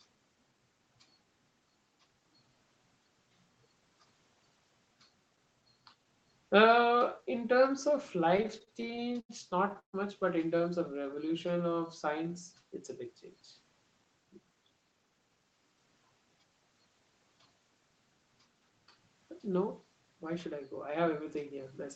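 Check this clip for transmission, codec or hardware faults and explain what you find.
The clip has jitter buffer trouble in three forms: a run of stalls, one stretch slowed down and two stretches sped up. The call path caps the spectrum at 8 kHz, which points to Opus at around 24 kbps, and that band limit is expected, not a fault.

From 8.37 to 9.95 s there are repeated stalls (stutter). Packets arrived later or more slowly than playback consumed them, so the jitter buffer emptied sixteen times. Each time the receiver extended the last sound, about 392 ms in total and roughly a quarter of that span, with the longest gap at 140 ms, which faded out. Nothing is lost, but the speech catches and drags. A spectrogram shows repeated smeared, copied frames with flat harmonics, and the longest ones fade in level.

From 10.92 to 12.34 s there is a jitter buffer slow-down. The buffer was low or had just raised its target delay, so the receiver built a reserve by repeating single pitch periods, adding about 145 ms. 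Speech plays at 90% speed with the pitch unchanged, so sounds are drawn out. On a waveform, syllables look stretched, with periodic cycles duplicated back to back. A spectrogram shows longer harmonic runs at the same spacing.

From 14.40 to 15.87 s and from 20.99 to 21.60 s there is a jitter buffer speed-up. The buffer held excess audio, so the receiver cut short pieces of one or a few pitch periods to lower the delay. It removed roughly 150 ms in the first stretch, playing at 111%, and roughly 50 ms in the second, playing at 107%. Pitch stays the same, but the speech sounds hurried. Waveform syllables appear compressed, and a spectrogram shows shortened harmonic segments with the same spacing.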